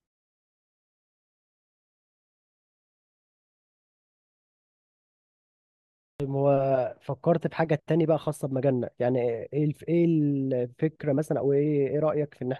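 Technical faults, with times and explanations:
6.10 to 6.20 s, clipped start after a pause: The speech resumes abruptly after about 6.1 s of silence, and its first 98 ms are missing. The output device went idle during that long silence. It needed time to wake and lock again when the sound came back. So the opening sounds were swallowed, and the speech cuts in mid-onset with no natural attack.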